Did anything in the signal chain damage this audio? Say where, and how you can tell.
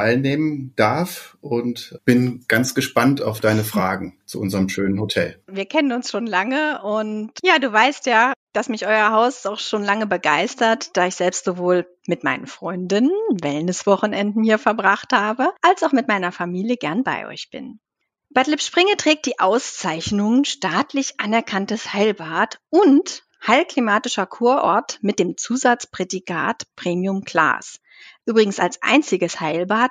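No, nothing audible points to damage at any stage between capture and playback.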